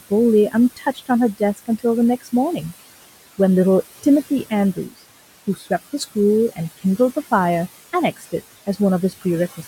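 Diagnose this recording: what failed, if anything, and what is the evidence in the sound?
The failure is in call processing, where noise suppressor artifacts run through the whole clip. The room noise, which sits about 17 dB below the speech, is pulled down by about 16 dB in the gaps and returns under the speech, so the background pumps in and out with every phrase. The suppressor estimates the steady noise and attenuates each frequency band frame by frame.

The same stage also cuts speech by mistake. Parts of the speech are turned down as if they were noise at 0.76–1.1 s and 1.34–1.84 s, each by up to about 17 dB, and at 5.55–5.71 s and 8.16–8.33 s, by about 11 dB and about 12 dB. Only part of each span is hit, roughly 100 to 200 ms. Low-level speech energy there fell near the noise estimate, so the gain dropped and those sounds come across as swallowed or faint.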